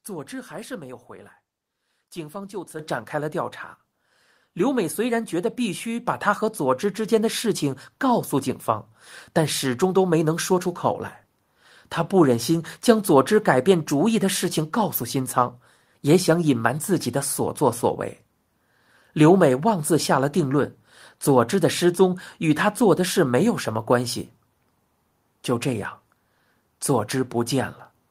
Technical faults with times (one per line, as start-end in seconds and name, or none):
2.79 microphone volume stepped up
6.06 microphone volume stepped up